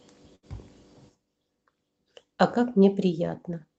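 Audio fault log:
0.35 to 0.45 s: short stall from a late packet. A packet arrived late, so the jitter buffer ran dry. The receiver stretched the last sound by 74 ms, then resumed. Nothing is lost, but the speech briefly holds with a faint buzz or dip, and the rest plays 74 ms later.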